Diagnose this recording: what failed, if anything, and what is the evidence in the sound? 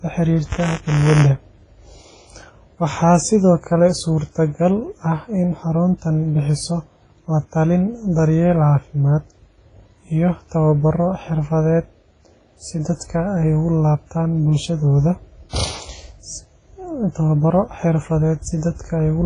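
The whole recording has a ringing, washy quality, with a hiss that rises and falls with the speech and nothing above about 10.2 kHz. That points to the codec stage, likely WMA compression at a low rate, around 24 kbps with an early WMA encoder. Long transform blocks smear quantisation noise over tens of milliseconds, and at that rate weaker spectral lines simply get zeroed, so the damage here is heavy.

From 0.45 to 1.29 s there's a robotic buzz at 188 Hz that sits on top of the speech. That's buffer tearing in the driver or buffer stage. The writer and the hardware reader of the ring buffer have drifted until they cross inside each period. A small slice of every buffer, roughly 5%, still holds audio from about 20 ms earlier, with hard joins either side. The repeat rate fits a 256-sample buffer.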